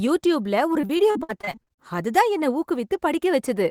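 From 0.73 to 1.80 s, before "அதுதான் என்ன", repeated packet loss leaves about a dozen gaps up to 57 ms, each patched with prior sound, making speech choppy and robotic.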